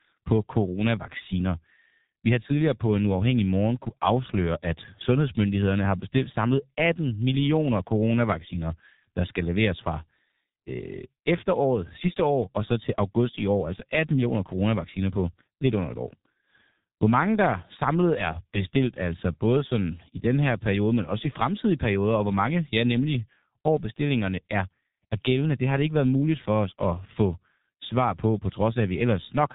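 From start to finish the speech carries heavy G.723.1 codec damage. The codec models the voice in coarse frames and refreshes that model slowly, so fast articulation smears and consonants blur together. The tone is hoarse and muffled, and the bandwidth stops at 3.8 kHz, removing the air and sibilance above it. The degree of roughness fits the 6.3 kbit/s mode of this narrowband telephony codec.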